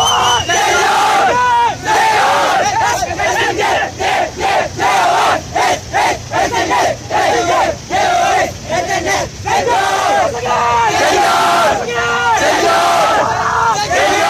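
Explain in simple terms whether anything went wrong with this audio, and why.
Nothing went wrong with this audio. Listening all the way through, there are no technical faults to point to at any moment.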